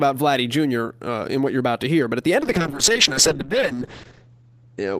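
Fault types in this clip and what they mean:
call bitrate drop: From 2.43 s, after "at the end of", coding turns coarse and muffled, fitting a fall from about 32 to 7 kbps. A spectrogram shows the top edge dropping from 20 kHz to a hard 8 kHz ceiling, worst for 1.36 s.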